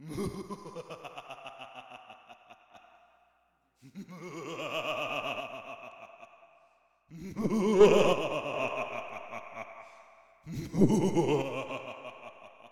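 At 0.35–2.75, 5.41–7.81, 8.13–8.53 s and from 11.42 s to the end, the level falls abruptly by about 6 dB, likely one channel dropping out. The waveform's envelope steps down and the spectrogram dims evenly across frequencies.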